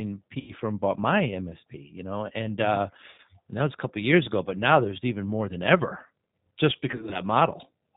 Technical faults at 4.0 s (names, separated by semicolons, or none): G.729 codec